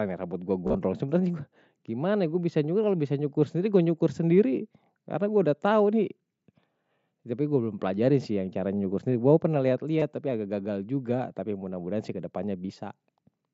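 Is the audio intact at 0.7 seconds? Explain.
No. Concealed Bluetooth headset packet loss at 0.67–0.75 s: about 52 ms of lost packets, with a 30 ms run, are filled by repeating recent waveform, giving a brief buzzy tone.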